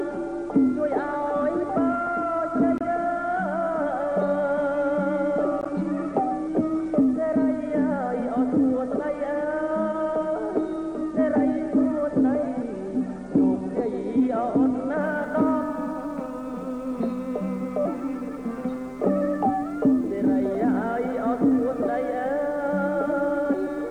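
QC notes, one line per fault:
15.01–23.90 s, low bit depth with dither: a steady, even hiss appears and runs to the end, around 40 dB below the signal, consistent with a reduction to 10 bits. Dither turns the rounding error into flat noise, so there is no gritty distortion that tracks the level.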